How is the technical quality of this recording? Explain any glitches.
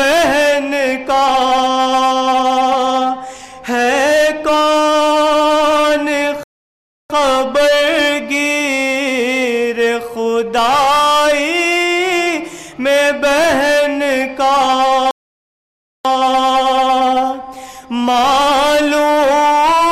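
The recording has two rebuffering stalls that interrupt playback. The first runs from 6.43 to 7.10 s and adds 0.66 s. The second runs from 15.11 to 16.05 s and adds 0.94 s. In each, the player exhausted its downloaded audio and waited for more data. The sound drops abruptly to silence, then picks up exactly where it stopped. No audio is lost, but the pauses stretch the timing.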